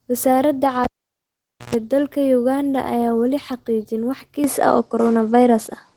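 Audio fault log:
throughout: Opus voice compression. At a bitrate that fits about 16 kbps, the hybrid coder pairs linear-prediction coding of the lower band with a transform layer above 8 kHz. The excitation is coarsely coded, so the speech has a plainly audible hoarse, slightly robotic edge and a muffled sound.
0.84 to 1.74 s: cable pulled and plugged in. A pop opens roughly 0.85 s of near silence as the live cable leaves its socket. As it goes back in, about 116 ms of 60 Hz mains buzz sounds while only the tip makes contact, and a second pop brings the speech back.
4.44 s to end: input switched to a poorer device. With no gap at the change, the speech drops to nothing above about 10.8 kHz. It becomes duller and boxier, shifts in level by about 5 dB and carries a new noise floor about 50 dB down. This is likely a change of microphone or headset profile mid-recording.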